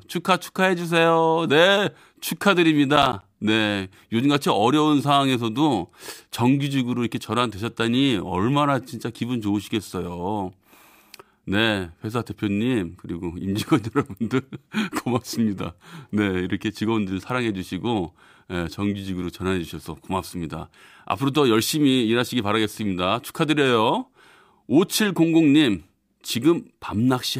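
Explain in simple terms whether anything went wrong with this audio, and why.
Between 2.96 and 3.22 seconds there's a short burst of processor overload crackle. The computer couldn't keep up, so a handful of tiny chunks, around 10 ms each, came out as silence. Those quick dropouts stack into a gritty crackle on the speech.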